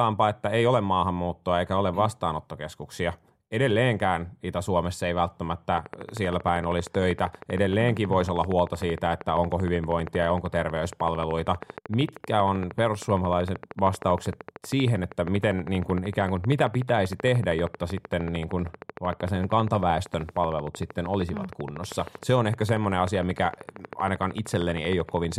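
From 5.78 s to 25.33 s a train of clicks runs over the speech. The pulses arrive 12.9 times a second, evenly spaced, some three hundred of them. Each pops well above the speech, even in pauses. Likely cause: nearby interference or a faulty connection or power supply.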